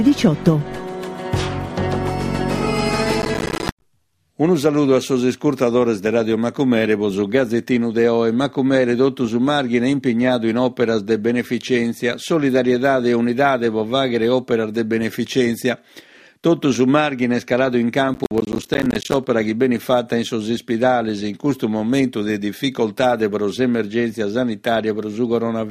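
There's processor overload crackle twice, from 3.22 to 3.82 s and from 18.14 to 19.27 s. The audio breaks into gritty tearing as dozens of tiny silent gaps with hard edges pile up, which fits a machine missing its deadlines on buffers of around 10 ms.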